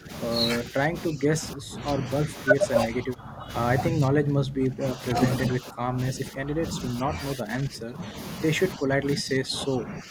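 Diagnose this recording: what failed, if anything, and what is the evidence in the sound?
Speech suppressed in double talk (call processing): the speech level dips by about 10 to 20 dB at 0.0–0.11, 0.63–3.5, 3.9–5.16, 5.49–6.64, 7.02–8.16 and 8.76–10.1 s. The likely cause is an echo canceller ducking the talker during far-end speech.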